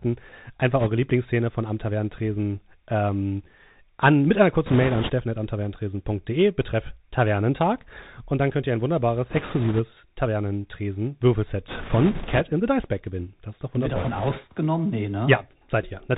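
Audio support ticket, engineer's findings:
Bluetooth CVSD headset codec, whole clip: narrowband, scratchy sibilants, granular hiss under the speech, harsh distortion on loud high-frequency bursts. Component: headset link on the CVSD codec, which fits a 64 kbit/s one-bit delta stream. Mechanism: one up/down bit per sample with an adaptive step; steep transients outrun the step size. Spectrogram: hard ceiling near 4 kHz, nothing above, a diffuse noise floor across the band. Waveform: stair-stepped, slope-limited edges on loud onsets.

Bit errors on a Bluetooth voice link: rushing, crackly noise bursts at 0.80–0.88 s, 4.66–5.12 s, 9.29–9.81 s, 11.68–12.41 s, 13.95–14.38 s. Heaviest around 4.66 s. Component: radio link corrupting the CVSD bitstream at an error rate of a few percent. Mechanism: flipped bits each nudge the decoder by one step scaled to the speech level and decay, so the result is a noise wash rather than clicks. 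Spectrogram: broadband noise patches within the 4 kHz band. Waveform: fuzzy envelope with no isolated spikes.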